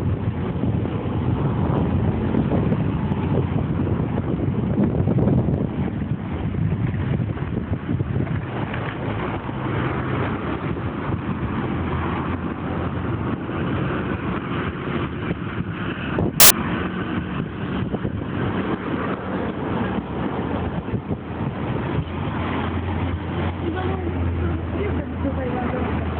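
Samples built from the wrong bytes break up the audio from 16.40 to 16.50 s as a burst of loud, harsh broadband noise. For about 0.1 s the reader combined each sample's bytes wrongly (off by a byte, in swapped order or with another alignment), so fast-changing low bits became the dominant part of each value.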